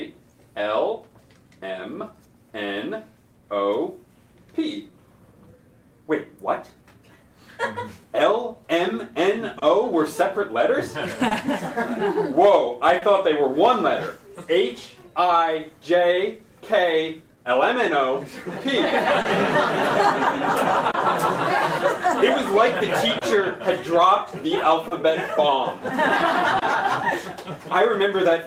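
Clock drift between sender and receiver runs through the whole of the audio. The sending device's clock is roughly 2 percent slower than the receiver's, so fewer samples arrive than the receiver plays out and its jitter buffer keeps sinking toward empty. The mismatch forces continual correction and leaves the timing subtly unsteady from start to finish.

Repeated timing corrections are the receiver's response to that slow sender, running from 0.30 s to 28.17 s. To keep the buffer from draining, it repeatedly repeats small slices of sound, always adding time rather than removing it. Together these stretch playback to about 99 percent speed and add roughly 0.3 s. Spaced unevenly, the corrections come across as faint hiccups and a slightly uneven pace.

Scattered short gaps fall in two stretches, 9.59 s to 13.04 s and 23.18 s to 26.64 s. In each, about three packets arrived late or not at all, and the receiver bridged each hole by extending the sound just before it. 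Each stretch has around a tenth of a second patched in this way, and the longest gap is about 30 ms. No audio is actually lost, but brief ticks or smears mark those patches.

A short stall from a late packet occurs at 19.22 s to 19.27 s and again at 20.91 s to 20.96 s. In both, a packet was still missing when it was due and the jitter buffer ran dry. The receiver held the last sound for 30 ms until the packet came in, matching a 30 ms jump in network delay, then carried on from the same point. The result is a momentarily drawn-out sound, possibly with a faint buzz or dip.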